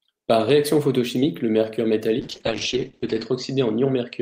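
At 2.21 s, right after "réaction photochimique le mercure", a call bitrate drop sets in and lasts until the end of the clip. The call's bandwidth estimate collapsed, so the encoder was forced onto a much smaller bit budget. The coarser coding, which fits a fall from about 40 kbps to 9 kbps, makes the speech rough and watery. Audio bandwidth also narrows from 20 kHz to 8 kHz, which muffles the top end. The worst stretch lasts about 1.03 s.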